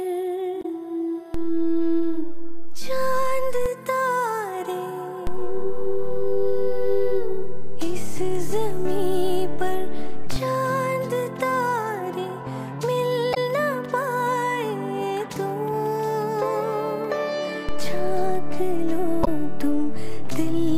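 Damaged data in the compressed stream hits three times, at 0.61 to 0.65 s, 13.33 to 13.37 s and 19.23 to 19.28 s. The decoder misreads corrupted frames, loses sync and hunts for the next valid header, so each spot is a brief chirp or blip. A DC step shifts the waveform's zero line three times, as if an offset input were switched in, from 1.34 to 3.66 s, from 5.27 to 10.36 s, and from 17.69 s to the end. Each shift lands as a low thump or click while the sound carries on unchanged.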